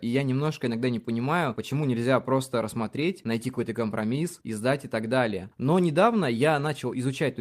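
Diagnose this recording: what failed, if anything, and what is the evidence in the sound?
Nothing in this speech recording points to a failure at any stage, so there's no diagnosis to make here.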